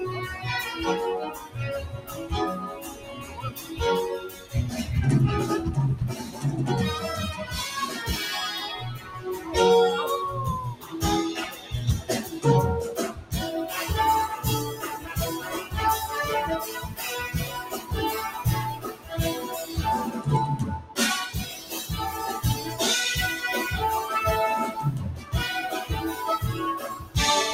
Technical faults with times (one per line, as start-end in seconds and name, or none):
0.00-27.54 noise suppressor applied to music or sounds
0.35-4.54 sound cut by the noise suppressor
6.18-6.44 sound cut by the noise suppressor
8.98-9.50 sound cut by the noise suppressor
10.75-13.32 sound cut by the noise suppressor
14.98-15.73 sound cut by the noise suppressor
16.88-21.74 sound cut by the noise suppressor
25.16-25.33 sound cut by the noise suppressor
26.94-27.15 sound cut by the noise suppressor